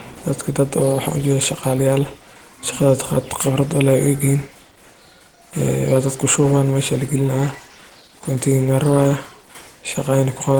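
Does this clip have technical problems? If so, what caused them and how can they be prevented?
Yes. Throughout the speech there is plainly audible Opus compression: the sound is muffled and hoarse, with a grainy, rough texture, which likely comes from low-bitrate Opus in its hybrid speech mode at a rate that fits about 16 kbps. On a spectrogram the band is still full width, reaching about 20.1 kHz, but the upper region looks smeared and noise-filled rather than showing clean harmonic detail. The waveform itself shows nothing obvious. To prevent it, encode at a higher Opus bitrate.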